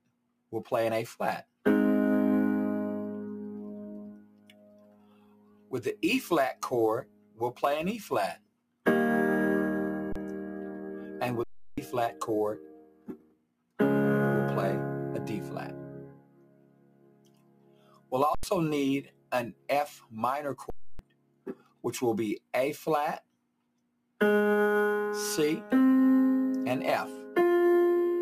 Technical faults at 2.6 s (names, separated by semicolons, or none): noise suppressor applied to music or sounds